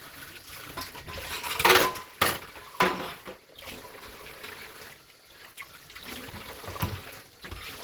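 Throughout this recording of sounds, detail turns muffled, hoarse and grainy; this is likely Opus compression in its hybrid mode, which fits a low rate around 16 kbps.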